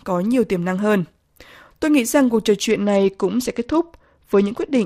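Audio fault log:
2.69 s to the end, Bluetooth SBC bit pool drop: the speech abruptly turns dull as the treble falls away, and a gritty, grainy noise rides on what remains, never clearing before the clip ends. The phone cut the SBC bit pool to keep a congested link running. Starved of bits, the highest sub-bands go empty and the lower ones are quantised coarsely. The change fits a fall from a bit pool of 28 to 10, around 84 kbps.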